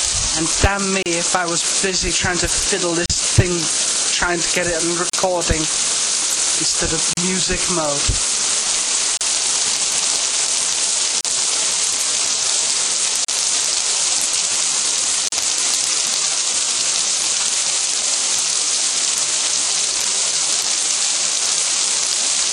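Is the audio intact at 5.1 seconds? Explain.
No, there is a gap at a join of encoded pieces from 5.10 to 5.13 s: a gap of about 38 ms cuts into the continuous sound. The audio was encoded as separate pieces, here recurring every 2 s, and joined without trimming, so each piece's encoder start-up delay and last-frame padding remain. The hole opens and closes with its edges smeared by the codec. The sound then resumes from the point where it stopped.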